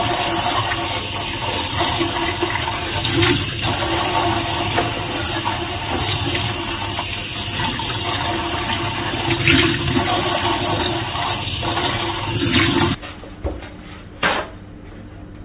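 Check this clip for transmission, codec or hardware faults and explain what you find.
Listening through the clip, nothing stood out as a problem of transmission, codec or hardware.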